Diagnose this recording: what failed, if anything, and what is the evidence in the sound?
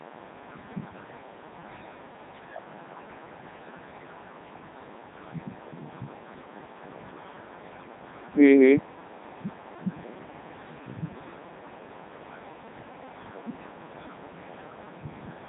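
The failure is at the codec stage: the speech has passed through the Codec 2 vocoder for its whole length. The voice sounds robotic and buzzy, and nothing is present above 3.8 kHz. The damage is heavy and fits the top 3.2 kbit/s mode. Only pitch, voicing, energy and a spectral envelope survive, and the decoder rebuilds the voice from sine waves. That buzz is what separates it from plain band-limiting or a waveform codec, which keep the original waveform.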